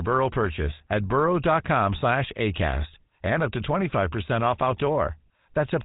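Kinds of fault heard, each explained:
GSM full-rate codec: the speech carries that buzzy, gravelly grain throughout, nothing comes through above about 3.8 kHz, and the damage is plainly audible, fitting a 13 kbps coder.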